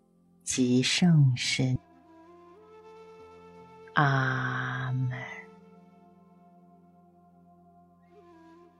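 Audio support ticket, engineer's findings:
Skip ahead at 1.75–1.77 s. Playback jumps forward with no fill, no silence, and the two sides are butted almost directly together. Roughly a second and a half of audio is absent. Probable component: receive path or jitter buffer. Mechanism: a queued stretch discarded on overflow while later audio was already waiting, so the output resumes further along. Delay drops by about the same amount, consistent with the buffer flushing its backlog.

Jitter buffer speed-up, 1.85–3.45 s. Audio runs fast at about 112% speed with pitch unchanged, and the pacing sounds hurried. Probable component: jitter buffer time-scale modification. Mechanism: the buffer still held more audio than its target, so the receiver trimmed short pitch-period segments repeatedly, removing around 0.2 s in total. Normal rate returns after 3.45 s.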